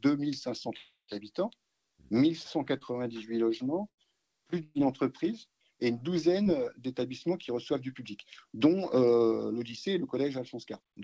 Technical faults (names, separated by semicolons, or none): long network dropout; short concealed packet loss; burst of packet loss